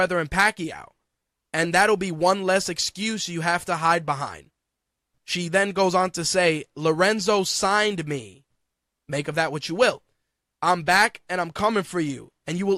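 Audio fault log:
No fault is logged for this speech clip.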